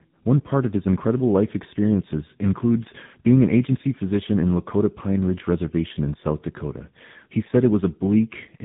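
Speech, and it's tandem speech coding the whole way through: two speech coders back to back, fitting a GSM full-rate leg re-encoded as AMR, so it's rough, warbly, muffled, with nothing above 3.8 kHz.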